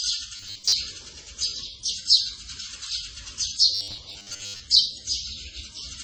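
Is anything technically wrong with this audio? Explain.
Yes, there are two faults.

Throughout, the sound has layered, smeared, swirly artefacts and a limited top end. This likely comes from transcoding between lossy codecs, ending in Vorbis. Each encoder has spent bits re-coding the previous one's damage. On a spectrogram there is a hard ceiling at the lowest cut-off in the chain, with blotchy, patchy texture below it.

From 0.36 to 0.72 s and from 3.75 to 4.61 s, the sound turns into a rigid, metallic buzz at 100 Hz. This is likely robotic sound from repeated short buffers. It fits a 10 ms block being replayed while the real audio is skipped, covering most of the first stretch and about half of the second. A spectrogram shows evenly spaced horizontal lines every 100 Hz, and the waveform shows identical 10 ms blocks.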